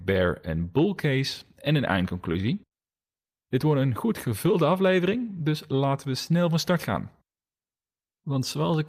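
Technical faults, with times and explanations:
1.99–2.74 s, repeated stalls (stutter): Just after "bull case en een", the speech drags and hiccups six times. Packets reached the receiver late, more slowly than they were played. The jitter buffer kept running dry. Each time, the receiver stretched the last sound to cover the wait. About 112 ms was filled this way, roughly 15 percent of the span. The longest gap was 57 ms. Nothing is lost, but the flow stumbles.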